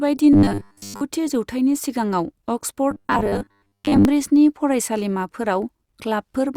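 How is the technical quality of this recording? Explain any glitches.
The recording has two stretches of robotic sound from repeated short buffers, from 0.33 to 1.02 s and from 2.91 to 4.05 s. In both, the speech turns into a stiff, metallic buzz near 100 Hz that still roughly tracks the words. The likely cause is audio arriving too slowly, so the same tiny slice was replayed to fill the gap. A 100 Hz buzz fits a slice of about 10 ms. Most of the real audio in those stretches is lost.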